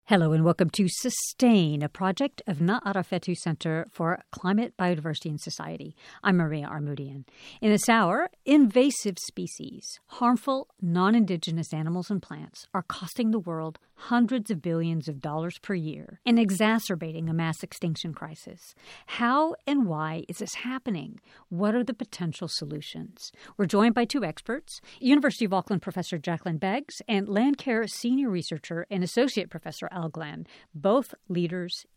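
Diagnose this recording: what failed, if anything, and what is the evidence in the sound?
Listening closely to this speech recording, nothing stood out that would point to a failure at any stage of the chain.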